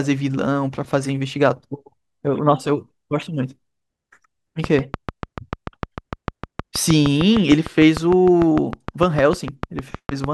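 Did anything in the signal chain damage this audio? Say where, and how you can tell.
Yes. A train of clicks, likely interference coupling into the analogue wiring, runs from 4.64 to 10.25 s: about forty similar pulses at a regular 6.6 per second, peaking about 15 dB above the speech, ticking steadily through the pauses as well.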